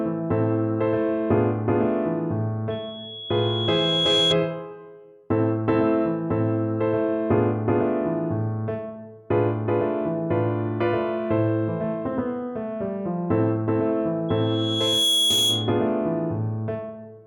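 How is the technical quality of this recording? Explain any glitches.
The recording has two loudspeaker feedback squeals. The first runs from 2.70 to 4.36 s and the second from 14.29 to 15.88 s. In both, a microphone was picking up a loudspeaker it was feeding, and at 3.3 kHz the loop gain went above one, so that frequency kept reinforcing itself. Each squeal is a single piercing 3.3 kHz tone that swells up, over about a second and a half the first time and under a second the second time, until it sits a few decibels above the rest of the sound.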